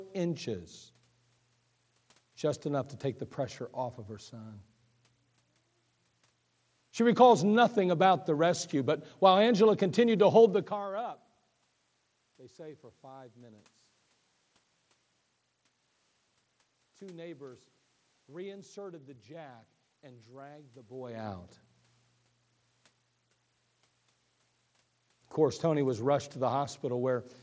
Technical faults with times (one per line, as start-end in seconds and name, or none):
none